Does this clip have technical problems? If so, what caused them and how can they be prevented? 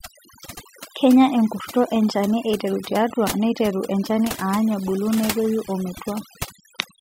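Yes. Throughout the clip, overdone noise removal: a noise reduction stage set far too aggressively pulls individual frequency bands down whenever they sit near its noise estimate, taking quiet speech detail with them, so pauses fall to near silence with twinkling specks. Prevent it by using gentler reduction settings and checking the result by ear.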